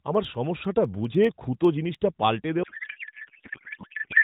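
Speech carried through an AMR narrowband mobile codec, its spectrogram capped at 4 kHz, shows periodic USB or driver dropouts from 0.15 to 1.95 s: about twenty tiny skips, each a fraction of a millisecond, every 0.1 s, heard as regular ticks and seen as evenly spaced thin vertical lines and waveform steps. From 2.63 s to the end, a codec payload misread (octet-aligned AMR decoded as bandwidth-efficient) turns the speech into garbled warbling noise, with the harmonic striations replaced by smeared, formless energy.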